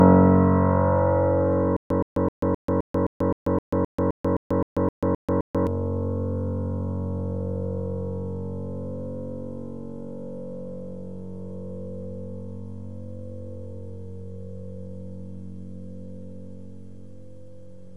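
Stutter with silent gaps from 1.77 to 5.67 s in this sound recording: a 122 ms fragment repeats 15 times every 260 ms, separated by 138 ms of digital silence, likely a stalled player or stream replaying its last buffer, so the intervening audio is lost.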